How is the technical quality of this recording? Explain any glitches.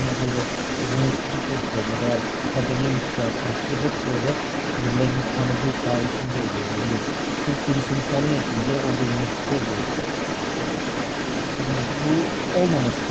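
Quality takes a real hit from the other side's voice leaking through, audible across the whole clip and sitting only a little below the main speech. It's likely the far-end loudspeaker audio getting past an echo canceller that didn't fully remove it. The top end stops around 8 kHz, which fits a lowish-bitrate Opus call path.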